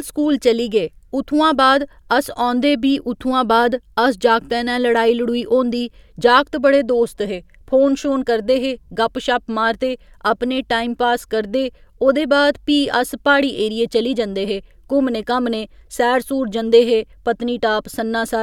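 No technical faults are audible.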